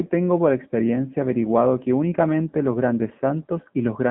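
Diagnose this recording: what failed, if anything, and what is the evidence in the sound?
AMR narrowband mobile codec damage runs through the whole speech clip, so the failure sits at the codec stage of a mobile call path. The speech is confined to a line band of roughly 150 Hz to 3.5 kHz, with nothing above it, and carries a plainly audible buzzy, synthetic edge. The codec rebuilds the voice from a vocal-tract model excited by a few pulses per 5 ms subframe, and at this degree of roughness that fits a low mode around 7.4 kbps.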